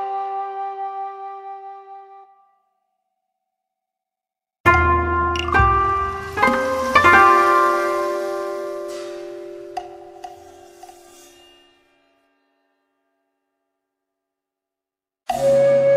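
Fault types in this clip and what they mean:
No faults heard in this clip.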